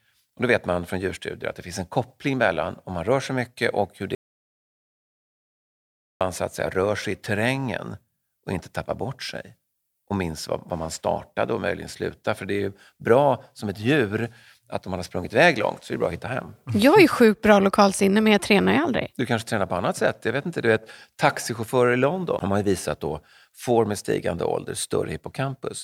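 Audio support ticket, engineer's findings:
Audio dropout to silence, 4.15–6.21 s. Speech stops dead after "sig mycket och hur", then silence for about 2.06 s, no room tone, resumes abruptly at "så att säga rör". Content in gap lost. Likely cause: input path lost (disconnected device, failed link or stray mute) while the recorder kept writing silence.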